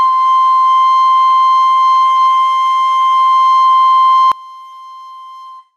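A music clip. At 4.32 s the sound suddenly drops by about 24 dB and stays faint and distant to the end. This is a collapse of the centre of the mix, and the likely cause is one channel inverted. With one stereo side's polarity flipped, everything the two channels share cancels when they are combined to mono. Only the small difference between them survives, heard as a faint remnant.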